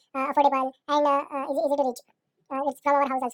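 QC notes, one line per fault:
Throughout: wrong sample rate. The speech runs at twice its proper speed and a full octave high, sounding hurried and chipmunk-like, because the samples are clocked out at double the intended rate with no conversion. This fits 24 kHz material played back at 48 kHz.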